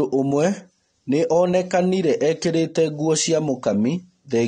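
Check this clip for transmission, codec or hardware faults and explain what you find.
One codec fault runs through the whole speech clip: AAC compression, most likely AAC-LC at a low rate. The damage suggests a bitrate around 32 kbps. Each frame's spectrum has too few bits for its quantised frequency lines, so the encoder pulls the cut-off down and drops or patches weaker bands. The audible result is a dull, smeared top end, with a warbling, fizzy texture on sustained sounds and sibilants.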